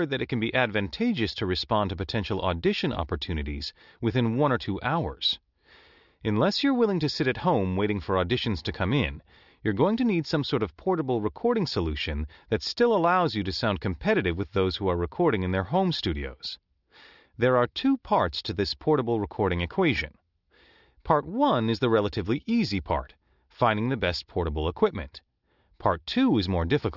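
Nothing in the speech stood out as a technical problem on listening.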